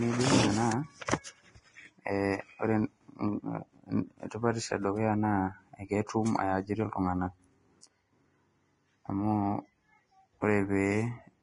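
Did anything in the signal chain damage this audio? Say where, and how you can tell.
Yes: Vorbis compression throughout, likely at the codec stage. Nothing sounds above 10.6 kHz, and coarsely quantised treble turns hissy and grainy, which fits roughly 29 kbps.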